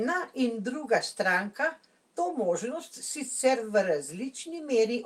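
No technical faults can be heard anywhere in the speech, so there is nothing to place in time order.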